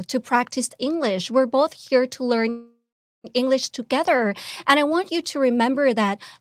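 At 2.49 s, after "both here to learn", a call audio freeze stretches the last sound into a fading buzz, then about 0.45 s of silence until 3.26 s. Likely, stalled packets emptied the jitter buffer. Speech resumes intact. On the waveform there is a decaying tail, then a flat gap.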